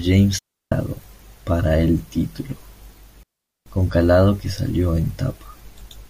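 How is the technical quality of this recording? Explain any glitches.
The recording has two clear gaps in the speech. Both are digital wireless dropouts. They occur at 0.38 to 0.72 s and 3.23 to 3.66 s, lasting 0.33 s and 0.43 s. The radio link lost too much data, so the receiver muted with a very short fade. Each gap is a clean hole of near silence. No noise burst surrounds either gap.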